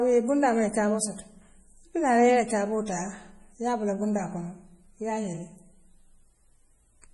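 From start to finish the speech has heavy MP3 compression damage, likely from encoding at a low bitrate around 32 kbps. Nothing is left above about 11.4 kHz, so the top end sounds dull and clipped off. With so few bits, faint frequency lines drop in and out between frames, and the result is a watery, swirling quality, metallic chirps on s sounds, and smeared consonant onsets. On a spectrogram this shows as a flat ceiling at 11.4 kHz, with blotchy, flickering islands of energy below it.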